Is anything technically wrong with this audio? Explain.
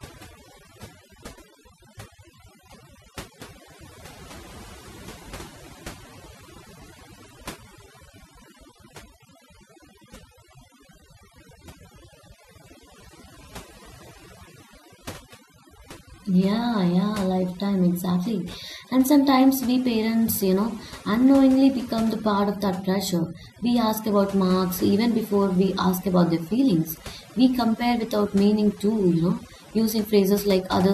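Yes. Overdone noise removal runs throughout the whole speech recording. A noise reduction process was set too aggressively, so any frequency band close to its estimate of the background noise gets pushed far down or switched off entirely, taking quieter parts of the voice along with the noise. Between phrases the background collapses into near silence dotted with twinkling specks.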